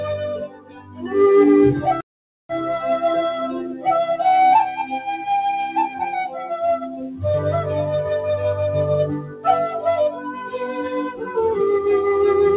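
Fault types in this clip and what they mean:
Noise suppressor applied to music or sounds: A speech-oriented suppressor stays active through the whole clip, treating steady tones, ambience and decay as noise to be lowered. The gain swings by about 10 dB, so held material pumps and thins while onsets pass. On a waveform the envelope breathes unevenly. On a spectrogram, sustained bands fade in and out below the call path's clean cutoff at 4 kHz while transient columns stay bright.
Sound cut by the noise suppressor: At 0.43 to 1.14 s, 3.48 to 3.86 s, 6.28 to 6.49 s, 6.81 to 7.22 s, 9.19 to 9.46 s and 10.1 to 11.34 s, the suppressor pulls particular passages down harder than the rest. The deepest dips are about 16 dB early on and about 8 to 13 dB later. The waveform shows sagging, hollowed stretches or tails cut short. On the spectrogram, sustained energy dims or vanishes there while sharp attacks remain visible.
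Playback stall: From 2.01 to 2.49 s the sound halts mid-flow for about 0.49 s and then resumes. The likely cause is the player running short of data or its thread being blocked, which leaves the output silent until it recovers. On a waveform this is a flat, silent gap with abrupt edges on both sides. A spectrogram shows a clean vertical blank strip across all frequencies, with no fade in or out.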